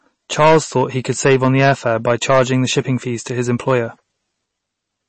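Hard clipping runs through the whole speech clip. Peaks driven about 11 dB past the limit are cut flat, so added high harmonics crackle only on the loudest moments, unlike codec damage. Throughout, there is also plainly audible watery, swirly smearing, with nothing above 8.3 kHz. This is likely MP3 compression, and it fits a low bitrate around 32 kbps. Unlike the clipping, it affects quiet passages too.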